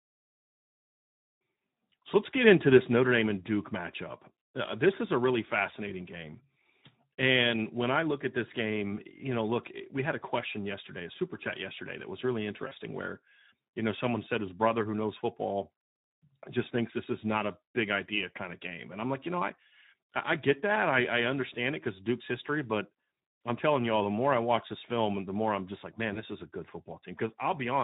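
Throughout, the speech is carried by the Speex codec at a low bitrate, around 11 kbps by the sound of it. Too few bits reach the excitation, so the voice comes out plainly hoarse and noisy.

At 12.67 to 12.73 s, between "yesterday that was really" and "where you know someone", VoIP packets went missing, which fits two lost 20 ms frames. The decoder's packet loss concealment extends the last pitch into a brief buzzy tone or coloured noise that fades. At 26.13 to 26.22 s, after "I'm just like man" and before "is a good", a single lost frame leaves a shorter fading tone or noise, and the voice stays weak or distorted just after "is a good" begins.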